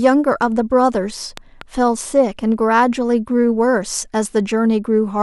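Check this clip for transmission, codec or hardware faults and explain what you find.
One hardware fault: a loud pop between 1.37 and 1.63 s. A voltage step or spike, likely from a plug, switch, static discharge or driver glitch, entered the speech signal. Two sharp pops, around 10 dB louder than the speech, sit on top of it while it continues underneath.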